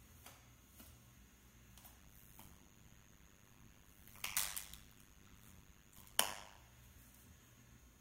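From 1.99 s to 6.59 s there's a strong overlap-add ripple. The audio was split into windowed frames and stitched back together with an overlap that doesn't add up to a steady gain, so the level swings once per frame, around a hundred times a second, and the dips go deep, about 60 dB. You hear it as a harsh, metallic buzz with extra tones around each note, chopping through the sound until it clears at 6.59 s.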